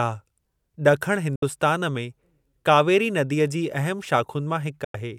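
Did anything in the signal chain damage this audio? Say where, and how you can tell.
Yes, a digital broadcast dropout at the reception stage. The speech fades out in about 3 ms and mutes from 1.36 to 1.43 s and from 4.84 to 4.95 s. The receiver muted over bad frames, and those gaps fit two or three lost frames.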